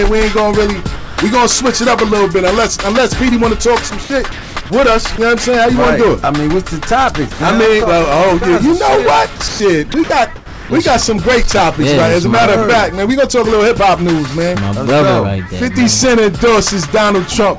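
At 0.96 to 1.18 s the sound gives way to steady noise for about 220 ms, then comes back. That's most likely sound dropped by the voice detector, with comfort noise filling the gap. The same thing happens briefly at 5.16 s, at 7.32 to 7.40 s, and at 10.36 to 10.70 s.

From 3.90 to 4.70 s, and again at 9.36 to 9.60 s and 9.92 to 10.10 s, it turns choppy. The sound has several holes filled with noise, which sounds like the voice detector chopping the sound by switching on and off repeatedly. There's nothing above 8 kHz anywhere, which fits the G.722 call codec.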